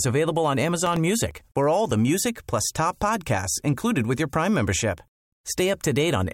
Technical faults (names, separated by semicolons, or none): processor overload crackle